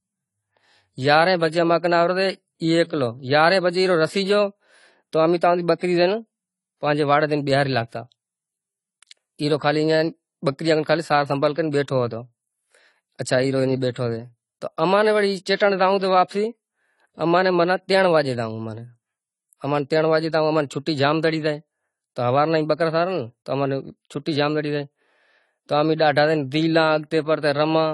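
The speech has most likely been passed through AAC compression with a low bit budget, consistent with AAC-LC at around 32 kbps. Nothing survives above 11.5 kHz, and the coarse quantisation leaves the audio plainly dull and smeared, with a fizzy, warbling edge on sibilants.

Pre-echo then appears twice, where a transform block holding a sharp onset spreads its quantisation noise backwards into the quieter moment before it. From 15.56 to 15.60 s, just before "راو تہ", a 43 ms smear of hiss runs ahead of the attack. Again at 16.28 to 16.31 s, just after "راو تہ", a shorter 27 ms wash precedes the onset, softening its edge.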